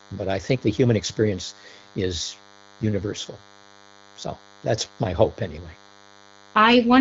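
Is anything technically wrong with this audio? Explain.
Yes, there's a DECT cordless phone buzz running under the speech from start to finish. A DECT handset or base nearby fires a radio burst every 10 ms, and the audio circuitry rectifies those bursts, so you get a thin, steady buzz at 100 Hz stacked with harmonics. It sits well below the speech, roughly 30 dB down, but it's constant. The wideband phone-call bandwidth, with nothing above 7.6 kHz, is just the HD Voice codec doing its job.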